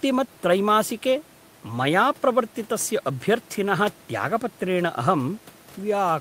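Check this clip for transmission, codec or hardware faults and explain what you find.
Nothing stood out on listening to this speech recording, apart from the room's own background noise sitting about 29 dB below the voice, which belongs to the recording rather than to any fault in the system.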